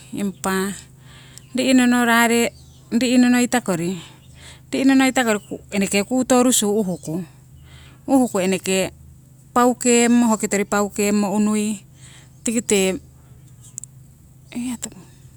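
Nothing in this speech recording stands out as a technical fault at any point, so there's nothing to flag here.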